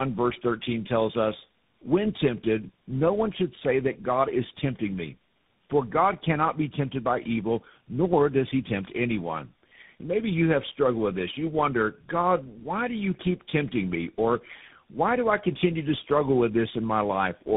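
Speech with tandem speech coding throughout: about four speech codecs in a row, likely ending in CVSD, stack roughness, muffling and warble beyond any single codec's sound, with nothing above 3.7 kHz.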